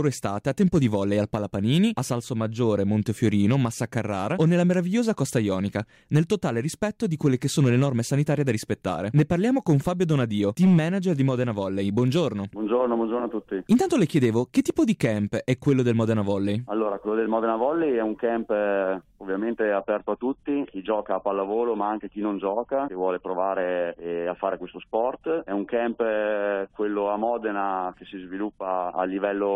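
At 19.74 s the sound suddenly thins out and stays that way to the end: an adaptive stream at a lower bitrate. The stream stepped down, likely to around 32 kbit/s AAC, so everything above roughly 11.1 kHz vanishes and smeary codec artefacts creep in, with no gap at the switch.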